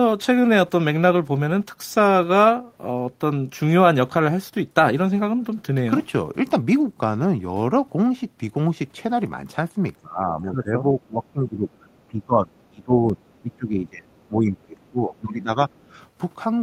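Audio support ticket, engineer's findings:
Speech suppressed in double talk: speech dips by about 10 to 20 dB at 10.02–10.87, 11.08–11.85, 12.09–13.21, 13.42–14.08, 14.28–15.5 and 15.69–15.91 s. Likely cause is the echo canceller turning down both sides during simultaneous talk.

Other side's voice leaking through: faint second-voice scraps, far below the talker, at 12.59–12.66 and 14.8–14.89 s. Likely cause is residual loudspeaker echo left by the echo canceller.

Block of digital silence: tick at 13.09 s from a roughly 2 ms hole cut to silence with hard edges. The output buffer was probably not filled in time.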